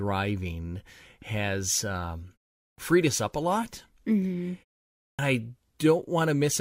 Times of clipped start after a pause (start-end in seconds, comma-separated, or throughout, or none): 2.70-2.78, 5.11-5.19